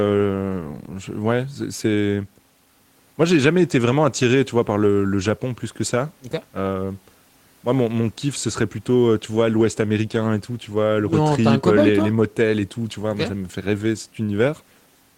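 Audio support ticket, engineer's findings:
No faults found; playback path checks out.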